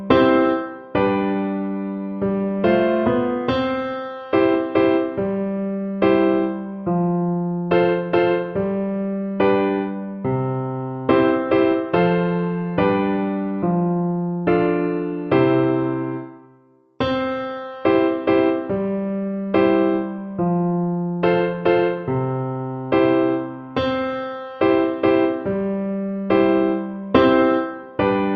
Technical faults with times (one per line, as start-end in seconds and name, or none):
none